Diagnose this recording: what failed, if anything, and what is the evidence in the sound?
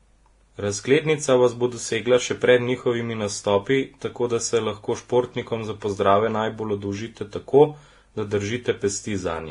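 At the codec stage, the speech carries two overlapping kinds of compression damage throughout, with nothing above 10.6 kHz. A single low-bitrate encode leaves one consistent texture. These mixed artefacts point to transcoding between lossy codecs, likely Vorbis then WMA, the second re-coding the first's errors.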